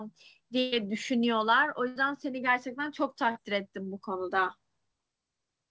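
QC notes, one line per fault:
0.60–0.74 s and 1.88–1.98 s, burst of packet loss: the receiver runs on the last sound and turns it down, giving a held buzz or fading hiss for about 120 ms, then about 77 ms, before speech picks up further along, with that stretch gone.
3.32–3.37 s, short concealed packet loss: roughly 35 ms gets patched by extending the preceding sound and blending back in, so you hear a quick smear or wobble, and a short consonant there can drop out.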